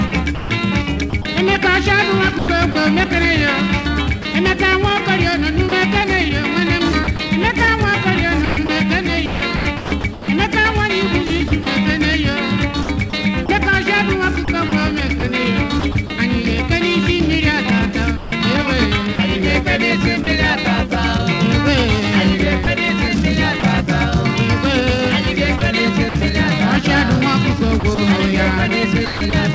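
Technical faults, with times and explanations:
0.08–2.75 s, 7.04–16.10 s, 18.17–20.27 s, 22.64–23.63 s, 25.58–26.15 s, 27.80–29.33 s: sound chopped by the voice detector. The sound turns choppy as brief stretches give way to synthetic hiss. The likely cause is the sender's detector repeatedly switching off, swapping in comfort noise for up to 1.17 s per stretch.
4.22–4.25 s and 5.69–5.72 s: sound dropped by the voice detector. A 30 ms piece of sound vanishes into steady noise. The likely cause is the detector mistaking it for background and briefly stopping transmission.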